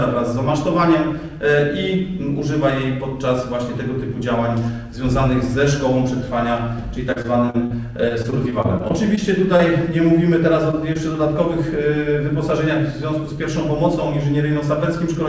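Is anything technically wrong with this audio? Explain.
Yes. Repeated packet loss (robotic sound) occurs from 7.12 to 7.72 s and again from 8.08 to 9.19 s. Packets arrived late or not at all in quick succession, and each hole was patched by extending the preceding sound. The first stretch has six gaps, the longest about 41 ms, with roughly 29% of it synthesised. The second has eight shorter gaps of up to 22 ms, with about 13% filled. Both come across as choppy, clipped-off sound.

Short concealed packet loss follows at 9.57–9.61, 10.71–10.75, 10.93–10.97 and 11.13–11.16 s. In each case about 20 ms never reached the decoder in time, so the receiver continued the last sound and then blended back in. Each one is a brief smear or wobble. The call path's band limit, with nothing above 8 kHz, fits the G.722 codec.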